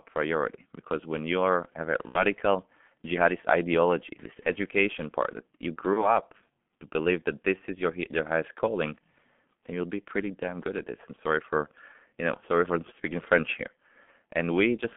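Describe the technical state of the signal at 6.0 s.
At 6.0 s the audio is inside a stretch of VoIP packet loss concealed by the speech codec, from 5.93 to 6.19 s, just after "education part that you". The gap fits a single lost 30 ms frame. The decoder fills it by repeating its last pitch and filter at falling gain, so the sound turns stretched and weak and takes about a quarter second to recover.

Underneath, the G.723.1 codec is in place throughout. Sound is held between roughly 150 Hz and 3.4 kHz, and heavy coding damage, consistent with about 6.3 kbit/s, leaves it muffled and hoarse with smeared consonants.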